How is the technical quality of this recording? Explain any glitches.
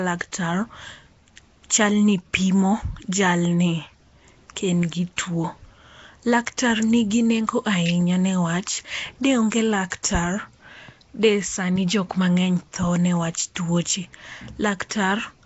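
Technical quality is noticeably compromised. The whole recording has a rough, hissy, underwater character, and there are two brief smeared attacks just before the ten-second mark and just after it.

Throughout the clip the sound is grainy and smeared, with nothing above 7.7 kHz. That points to Nellymoser compression as the likely cause, probably at around 32 kbps. It codes short blocks with very few bits, so weak bands get noise instead of real detail.

At 9.90 s and 10.03 s you'll catch pre-echo: a hiss of about 16 ms and 15 ms just ahead of sharp attacks. The codec spreads its quantisation noise across the whole block, so noise sized for the loud onset leaks backward into the quiet moment before it, leaving the attack soft and blurred.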